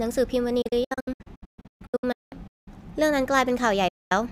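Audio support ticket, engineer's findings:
Speech repeatedly muting, 0.62 to 2.68 s: about 1.18 s of sound lost in short holes over a 2.05 s span, longest hole 192 ms, each edge faded in about 8 ms. Digital broadcast dropout at receiver; bad frames muted, 32 ms steps fitting frame-sized losses.

Single clean mute, 3.88 to 4.12 s, 224 ms gone, 8 ms fades. Same receiver dropout, one run of failed frames; programme resumes afterwards, missing material not recovered.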